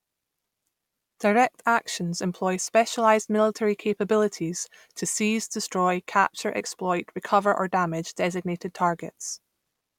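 Nothing technically wrong turns up anywhere in this short bit of speech, so there's no fault to pin to a time or trace back to a cause.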